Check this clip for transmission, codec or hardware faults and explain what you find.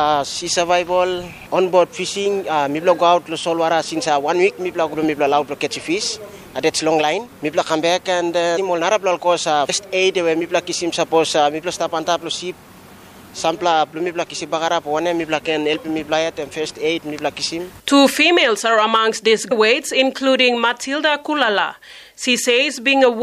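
Compressed frames skipped at 4.93, 8.56, 9.68 and 19.50 s. Runs of 26.1 ms frames were missing or rejected as damaged, so the audio jumps ahead by roughly 0.7, 0.7, 0.15 and 0.2 s, each leaving a brief discontinuity at the join.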